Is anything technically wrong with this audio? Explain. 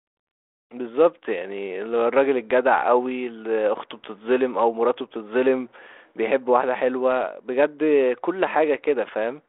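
No, nothing's wrong here; it's just telephone speech coded with G.726 ADPCM at 32 kbit/s, so the sound sits in the usual narrow line band of roughly 300 Hz to 3.5 kHz, with nothing above about 3.8 kHz.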